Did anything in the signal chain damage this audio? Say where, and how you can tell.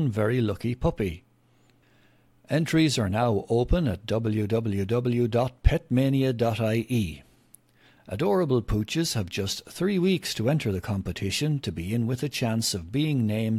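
No, nothing in the chain has audibly damaged this speech recording at any stage, from capture through to playback.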